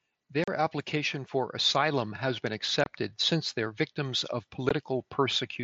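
From 0.32 to 2.73 s an automatic gain rising fault occurs: the gain control judges the input too quiet and ramps its gain up by about 4 dB over more than two seconds, so the speech and the background noise behind it swell together.

Unconcealed Bluetooth headset packet loss first appears at 0.44 to 0.48 s, inside that rise. About 37.5 ms of audio is missing, which fits several lost 7.5 ms headset frames. Nothing fills the gap, so the speech has a short hole with abrupt edges. Shorter holes follow at 2.84 to 2.86 s, about 22.5 ms, and at 4.69 s, about 15 ms. Each cuts in and out sharply, and the wideband mSBC link around them carries speech up to 8 kHz.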